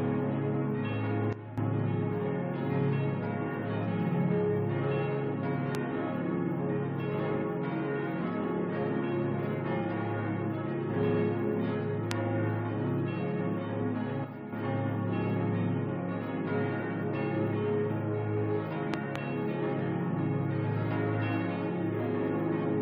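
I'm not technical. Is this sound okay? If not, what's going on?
No, there are two kinds of fault.

A sudden gain jump happens twice, from 1.33 to 1.58 s and from 14.25 to 14.52 s. Each time the whole sound, background included, abruptly gets quieter for about a quarter of a second before returning, and the first drop is the bigger of the two. There is no gradual fade. The volume is likely being changed digitally in a single step instead of being smoothed.

A loud pop is heard at 5.75 to 5.77 s and at 12.11 to 12.13 s, and as two pops in quick succession between 18.94 and 19.18 s. Each is a sharp burst much louder than the surrounding sound, which carries on underneath. These are likely electrical jolts from a plug, switch, static or a glitch in the audio device that get added to the recording.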